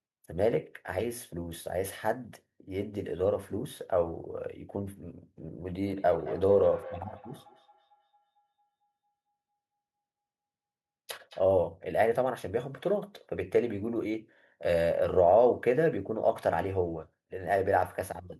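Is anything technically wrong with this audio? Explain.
Yes. From 5.73 to 11.52 s the speech has a feedback echo between two devices. Each phrase returns as a distinct copy about a fifth of a second later, peaking about 19 dB below the direct speech. Two devices in the same room share the call. One plays the other's outgoing audio, that microphone picks it up again, and neither echo canceller recognises sound played by the other device. Room reverberation, by contrast, smears into a continuous tail rather than returning as a separate copy at a fixed interval.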